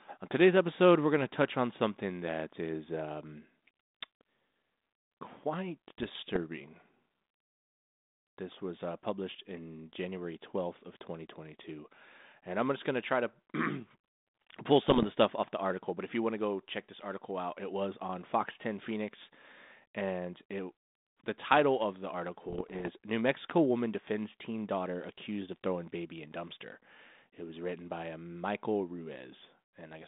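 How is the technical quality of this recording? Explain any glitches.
The recording has three short bursts of damage on a narrow telephone-band line running from about 200 Hz to 3.7 kHz, with the light graininess of G.726 ADPCM at 32 kbit/s. Bit errors on an ADPCM link strike at 5.98–6.43 s, 14.88–15.05 s (just before "the stuff off the"), and 22.48–22.89 s (after "the title of the"). Flipped bits derail the decoder's step size and prediction, so each error rings on as pops and rough bursts. The middle burst has the heaviest error rate, about 1% against about 0.4% for the other two.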